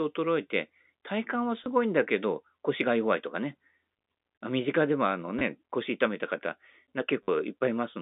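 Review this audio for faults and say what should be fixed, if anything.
Packet loss with last packet repeated at 1.64–1.66 s, 5.39–5.41 s and 7.23–7.28 s (20, 20 and 50 ms). The receiver replays stale audio, which fits 10 ms packets, so each gap is a robotic stutter rather than silence. Stronger jitter buffering with proper concealment would prevent it.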